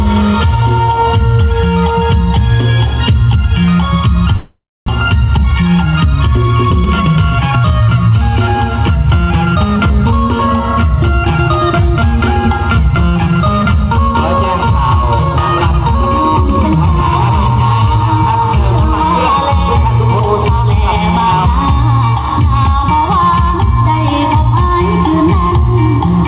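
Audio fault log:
4.36–4.90 s, long network dropout (likely): the last sound gets stretched into a fading buzz, then drops to about 0.27 s of near-silence, and the audio picks up again with roughly 0.4 s gone. The receiver was covering a gap where nothing arrived.
5.10–6.28 s, jitter buffer speed-up: right after the gap, the audio runs about 8% fast at the same pitch and sounds a bit rushed. The receiver is snipping out tiny pitch-period slices, roughly a tenth of a second in total, to drain the backlog.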